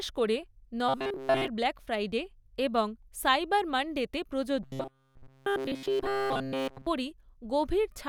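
Audio likely arrived too seldom, so the player looped a short buffer of about 7.5 ms, producing robotic sound from repeated short buffers. From 0.89 to 1.48 s, before "ব্ল্যাক ফ্রাইডে এবং", and throughout 4.63 to 6.87 s, speech becomes a rigid metallic buzz at 133 Hz.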